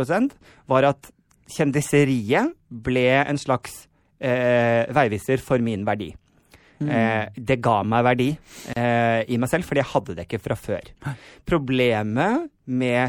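From the first second the speech carries plainly audible MP3 compression damage. The likely cause is an MP3 encode starved of bits, at a level that fits a 64 kbps setting. Weak frequency detail flickers in and out between frames. That gives the speech a watery, swirly edge. S sounds turn metallic and chirpy. Sharp onsets smear.

At 8.73 s a gap at a join of encoded pieces breaks the speech. It lasts about 34 ms and ends at 8.76 s. The audio was encoded in separate pieces and spliced without trimming. The encoder's start-up silence and the padding of the final frame both stayed in. A brief dropout cuts into continuous sound with smeared edges. Then the speech resumes exactly where it stopped.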